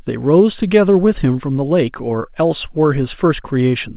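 Nothing stood out on listening to this speech clip that had passed through a call path with its content limited to below 4 kHz.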